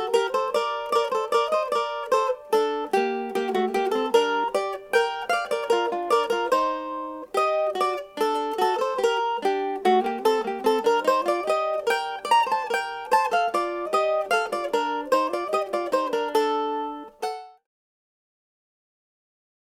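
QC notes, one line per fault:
No faults are present in this clip. A smooth fade out, beginning around 16.5 s and reaching silence at 17.67 s, brings the level down gradually with no click or hard edge.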